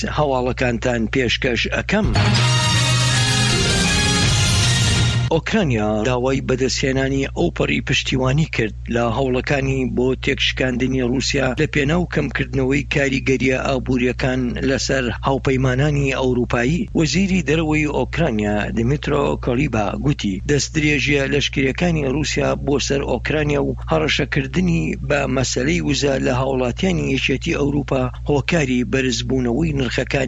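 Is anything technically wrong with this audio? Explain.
No, nothing is technically wrong with this audio.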